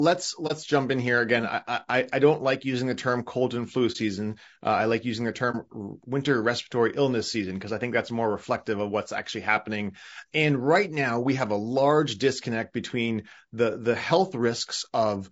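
From the start and throughout, the speech sounds rough and grainy, with a hiss-like fill between the harmonics and a top band that sounds thinned and somewhat synthetic. The damage is plainly audible. This is likely low-delay AAC compression (AAC-ELD) at a low bitrate, in the region of 32 kbps. At this bitrate too few bits are left to code the fine spectral detail, so the encoder spreads noise between the harmonics and rebuilds the highs cheaply.

Three brief, soft-edged gaps interrupt the speech: 0.47 to 0.52 s, just before "jump in here again"; 3.92 to 3.96 s, right after "term cold and flu"; and 5.51 to 5.56 s, between "I like using the" and "winter respiratory illness season". Each is AAC frame loss with muting. About 30 ms of coded audio went missing, and the decoder replaced it with silence. The overlapping windows fade the sound out and back in.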